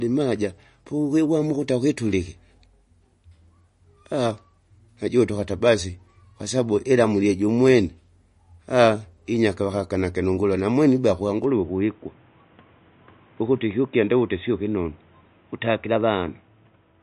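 Throughout this speech recording the sound has a watery, swirling quality, and the top end stops abruptly at about 10.6 kHz, with nothing audible above it. The likely cause is MP3 compression at a low bitrate, which fits roughly 40 kbps. Short of bits, the encoder cuts the treble at a fixed point and drops quieter frequency detail, and that detail flickers in and out from frame to frame. The result is plainly audible smearing. From 11.44 s to the end the sound turns dull and boxy, with nothing above 3.8 kHz, and a new layer of background noise appears, roughly 35 dB below the speech. There is no gap at the change and the loudness stays about the same. This points to the input being switched to a poorer device, likely another microphone or a headset's call profile, which passes a much narrower band and brings its own tone and noise.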